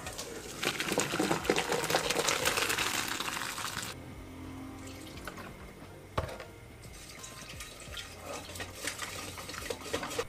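Six short stretches get frames out of order: 0.61–0.81, 2.03–2.22, 3.93–4.12, 5.51–5.71, 7.23–7.43 and 8.99–9.19 s. In each, two neighbouring runs of roughly 93 ms (which fits blocks of four frames) were decoded swapped, so the latter half plays first. You hear a brief garbled flutter. Nothing goes missing, and the timing stays the same.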